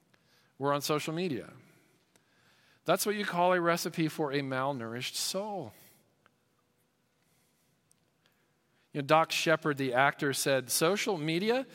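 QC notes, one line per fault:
No faults heard.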